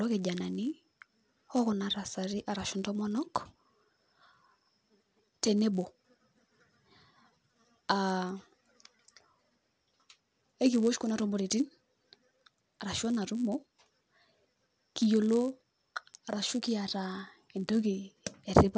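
From start to finish there's a 100 Hz buzz riding on the speech. That's the resampler restarted on every block: each 10 ms chunk got converted from 48 kHz to 16 kHz on its own, so every block edge picks up a small error, and those ticks fuse into a buzz that only shows up while sound is present.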